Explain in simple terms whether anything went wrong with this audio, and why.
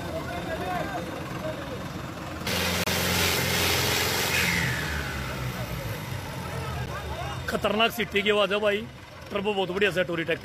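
Twice the sound drops out abruptly for a split second: a hole of about 30 ms from 2.84 to 2.87 s, and a shorter one of about 10 ms at 6.86 s. Both have hard edges. This is a gap between stream segments. The audio arrives in 4-second chunks, and where two chunks are stamped slightly apart in time, the player fills the space with silence. Nothing is lost, but a little silent time is inserted.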